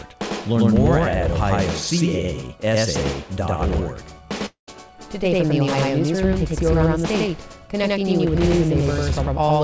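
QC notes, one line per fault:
throughout: doubled audio track, an equally loud full-band copy trails by about a tenth of a second with no room colour, likely from a second capture path.
4.46–4.69 s: long network dropout, about 0.2 s of audio never arrived. The waveform shows a fading buzzy fill, then near-silence, likely from lost packets, before the sound resumes.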